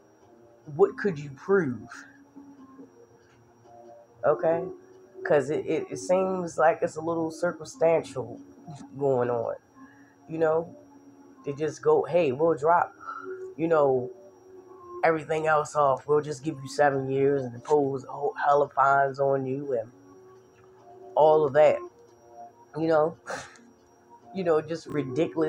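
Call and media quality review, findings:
Chunks out of order, 24.9–24.94 s: one 20 ms chunk plays one chunk late. Brief jumbled blip, three hard joins, nothing lost. Probable receive-side packet reordering.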